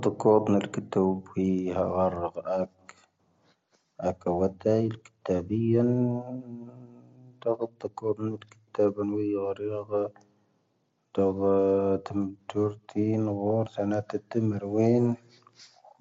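At 13.65 s there is concealed Bluetooth headset packet loss. About 15 ms of speech, which fits two lost frames, never arrived from the headset. The receiver filled the gap by repeating a matching piece of the preceding waveform. The result is a brief, buzzy patch inside the mSBC-coded speech.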